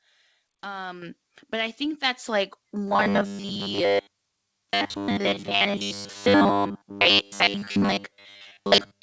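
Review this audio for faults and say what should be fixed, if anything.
At 1.02 s the microphone volume steps up by about 8 dB in one jump. Voice and background rise together. The call software judged the input too quiet and raised the device level mid-stream. Prevention: set a fixed input level and disable automatic microphone gain adjustment.

From 2.88 s to the end, the speech turns into a rigid, metallic buzz at 100 Hz. It still roughly follows the words. This is robotic sound from repeated short buffers. The likely cause is audio arriving too seldom, so the software repeats the last 10 ms and skips real audio, for most of that stretch. The G.722 call path limits the sound to 8 kHz but is not at fault. Prevention: give audio capture and delivery enough scheduling priority and buffering so that new audio keeps arriving on time.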